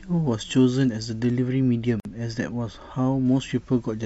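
From 1.21 s to 3.26 s, a treble-cut de-emphasis filter has been applied wrongly, either to speech that was never pre-emphasised or a second time over a correction already made. The high end rolls off gradually rather than at a sharp corner, sitting about 11 dB down at 10 kHz relative to 1 kHz. Through this stretch the speech turns dull and muffled, losing the crispness of its consonants, then brightens again after 3.26 s.

Within that span, from 2.00 s to 2.05 s, there is a gap at a join of encoded pieces. The speech was encoded in separate segments that were spliced without trimming, so the encoder's start-up delay and the padding of the final frame both remain in the stream. This leaves a 51 ms hole of silence in otherwise continuous speech, with its edges smeared by the codec. The speech then resumes from exactly where it stopped. The joins fall every 10 s, so this is the only one heard here.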